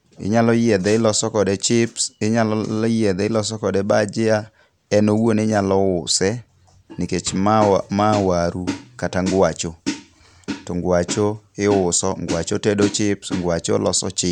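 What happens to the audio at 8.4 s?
Nothing goes wrong at 8.4 s; the speech carries on intact through that moment, with no dropout, click, distortion or other fault to be heard.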